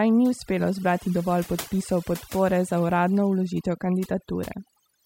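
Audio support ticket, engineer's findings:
Overdone noise removal, present throughout the speech. Background pulled down, with twinkling specks between phrases. Probable component: noise reduction stage, set too aggressive. Mechanism: individual frequency bands near the noise estimate are cut hard or muted, and quieter parts of the voice fall under that threshold and vanish with the noise.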